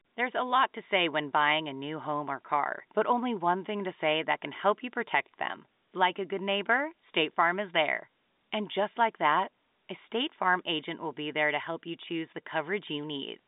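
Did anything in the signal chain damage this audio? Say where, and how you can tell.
No: the chain is an ordinary G.711 A-law telephone path at 64 kbps, passing 200 Hz to 3.7 kHz with nothing above 3.8 kHz, which is the line's own band limit rather than damage.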